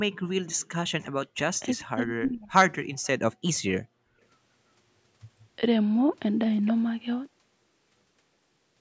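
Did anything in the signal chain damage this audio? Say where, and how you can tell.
Yes. Background gated by the echo canceller, in call processing: room sound drops about 40 dB at 0.15 to 0.3 s, and about 37 dB at 3.82 to 4.2 s.

Speech suppressed in double talk, also call processing. The speech dips deeply at 0.85 to 1.16 s and 1.6 to 2.57 s. Both sides talking at once is the likely cause.

Echo leak from a loudspeaker end. A faint delayed copy, about 354 ms late and well below the speech, appears at 3.54 to 3.72 s. Incomplete cancellation is likely.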